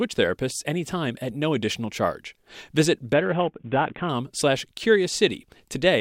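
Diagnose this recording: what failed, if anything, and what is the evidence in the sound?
A Bluetooth SBC bit pool drop hit the codec stage from 3.13 to 4.09 s: the link congested and the encoder starved its sub-bands, pointing to a bit pool falling from 28 to about 5. The speech turns dull and gritty, then recovers.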